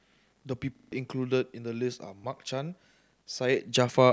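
From 0.76 to 0.92 s, a repeated buffer causes a stutter. A short slice, consistent with a 40 ms buffer, replays several times with hard joins. Roughly 150 ms of audio is lost. At 2.2 s, one brief repeat plays with a hard join.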